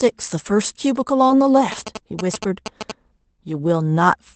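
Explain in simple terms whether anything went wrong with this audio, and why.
Yes, three things went wrong, all in the first three seconds of this speech clip.

Around 1.27 to 1.31 s there's a short concealed packet loss. A little chunk of the call, about 20 ms, didn't arrive in time, so the receiver guessed at it by stretching the sound that came just before and then easing back into the real audio. You hear it as a quick smear or tiny wobble, roughly a fiftieth of a second long.

Overlapping that, from 1.29 to 1.31 s, one lost packet was rebuilt from error correction. The packet that followed carried a rough backup copy of the missing 20 ms, and the decoder played that instead of leaving a hole. So there's no gap there, but that short stretch sounds a bit grainier and noisier than the audio around it.

Then from 1.72 to 2.92 s you get GSM signalling bursts. A 2G phone nearby was talking to the network, and the audio circuit picked up its radio pulses as sound. 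That comes through as a galloping dit-dit-dit of short buzzes, with a buzz pitch of about 217 Hz. It's fairly loud, not far below the speech itself, and it lasts just over a second.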